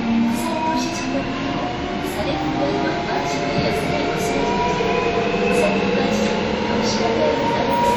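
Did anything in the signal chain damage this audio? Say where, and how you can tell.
Yes: WMA compression throughout, at the codec stage. Washy ringing and signal-following hiss likely come from coarse transform quantisation, fitting a low bitrate near 48 kbps.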